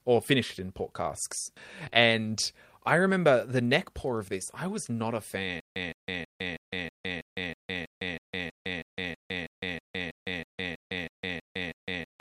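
At 1.89 to 1.93 s, right after "finished in port casks", there is a short concealed packet loss. About 20 ms of audio arrived too late to decode, and the receiver bridged the gap by extending the preceding sound before fading back into real audio. It comes across as a brief smear rather than a hard click. Because the fill is shaped from the surrounding sound and never repeats, it differs from a dropout or a loop.

From 5.60 s to the end, following "I was not a", the audio turns into a stutter with silent gaps. The same 165 ms fragment plays twenty times, and each repeat is followed by about 157 ms of digital silence, so the cycle runs every 322 ms. The likely cause is a stalled stream replaying its last buffer at each retry and then running dry. The exact repetition and the dead-silent gaps set it apart from concealment, which invents new sound.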